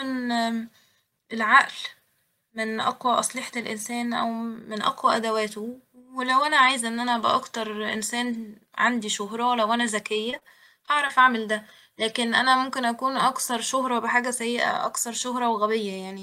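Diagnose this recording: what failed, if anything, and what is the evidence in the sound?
Network stage: repeated packet loss (robotic sound) between 10.13 and 11.11 s. A run of short holes, the longest about 32 ms, gets patched by stretching the last bit of sound, so the speech turns choppy, with pieces of it simply missing.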